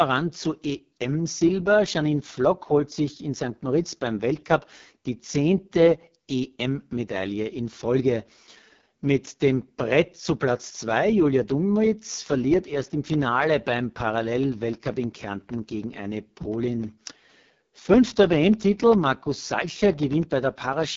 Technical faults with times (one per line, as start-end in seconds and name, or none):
0.00-20.97 AMR wideband (HD Voice) codec
12.14-20.83 periodic USB or driver dropouts